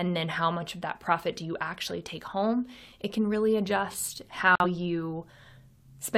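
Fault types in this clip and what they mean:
Corrupt frame muted: a damaged compressed frame got rejected by the decoder and replaced with silence, leaving an abrupt gap of about 0.1 s right after "it can really adjust".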